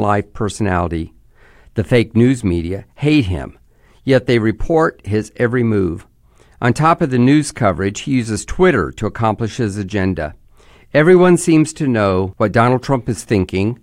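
Listening closely to the speech recording, nothing stood out as a technical problem at any point.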